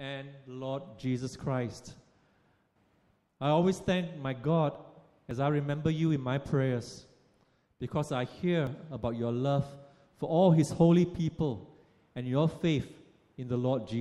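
At 5.31 s the sound jumps forward, as if roughly 20 ms just went missing, and at 8.67 s a smaller skip, around 10 ms this time. Neither leaves a gap of silence; the two sides are butted straight together. That pattern points to a likely dropped buffer (overrun), where the software fell behind and the hardware overwrote samples before they were read.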